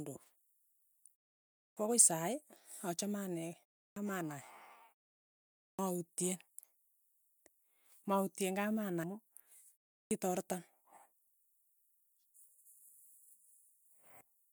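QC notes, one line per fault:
1.67, 3.87, 5.69 and 10.02 s: clipped start after a pause. Each time, sound resumes abruptly after a gap of 0.3 to 0.83 s and its first 89 to 97 ms are missing. The output path idles during the silence and needs time to wake or relock, so the first sounds are swallowed, while the pauses themselves stay quiet.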